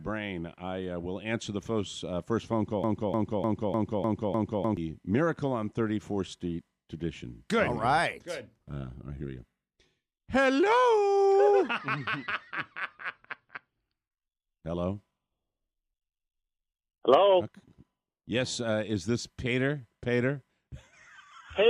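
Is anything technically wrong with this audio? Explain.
Yes. A broken-record loop runs from 2.84 to 4.77 s. The player, encoder or stream likely stalled and kept resending its last buffered fragment, so a 0.30 s slice of sound repeats identically six times back to back, and whatever should have played there is lost.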